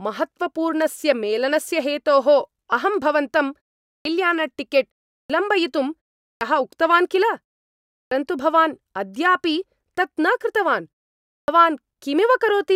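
Clipped start after a pause occurs at 3.94, 5.18, 6.29, 7.99 and 11.37 s. Each time, the output path has gone idle during a short gap of 0.35 to 0.62 s and needs time to wake and lock again. The first 110 to 124 ms of the returning speech are lost, so the word bursts in already under way, as at 7.99 s just before "भवान् अद्यापि तत् न". The pauses themselves fall silent as expected.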